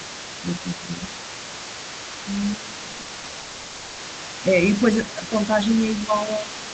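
From 0.0 to 4.46 s, and again from 4.62 s to the end, the other side's voice leaks through. It sits about 15 dB below the speech, likely echo the canceller left in the microphone signal.

At 0.83 to 1.02 s the speech dips by about 5 dB for roughly a tenth of a second. This is likely speech suppressed in double talk.

From 2.91 to 3.35 s repeated packet loss makes the sound choppy and robotic. Eight short gaps, the longest 40 ms, are patched by repeating the last sound.

From 3.39 to 4.01 s a long network dropout, likely a burst of missing audio, leaves 0.6 s of smeared, continued sound. The lost stretch never returns.

From 6.05 to 6.43 s likely double-talk suppression pulls the speech down again, by about 5 dB over roughly 0.15 s.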